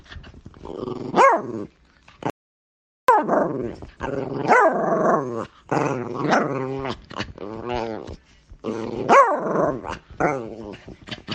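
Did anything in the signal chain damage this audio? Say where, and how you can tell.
Yes. There is an audio dropout to silence from 2.30 to 3.08 s, removing about 785 ms of sound. The audio stops abruptly mid-flow and returns just as suddenly, and the gap holds silence with no room tone underneath. On a waveform this is a flat line; on a spectrogram it is a fully black vertical band. The likely stage is the input side, where the device or link dropped out while recording continued writing zeros.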